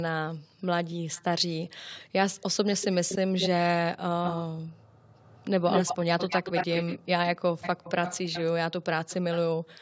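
A delayed copy of the speech keeps coming back. It's an echo leak, likely from a far end on loudspeaker whose echo canceller let its own pickup through. First comes a faint trace at 1.14–1.53 s, lagging about 283 ms. Then there are strong stretches at 2.41–3.48, 4.24–4.43 and 5.15–6.99 s, 208 ms behind and nearly as loud as the speech. The late ones, at 7.37–8.43 and 9.01–9.38 s, lag 295 ms and are somewhat quieter.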